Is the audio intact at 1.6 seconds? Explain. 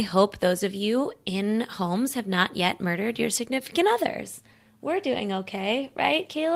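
Yes, the speech at 1.6 seconds plays through cleanly, with no dropout, click, distortion or other fault at that moment.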